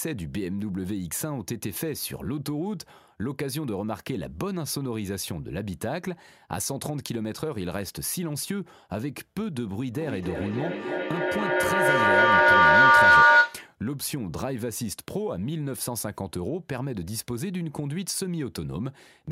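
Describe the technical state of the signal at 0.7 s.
At 0.7 s the speech signal is intact, with no dropout, distortion, glitch or other audible fault at that moment.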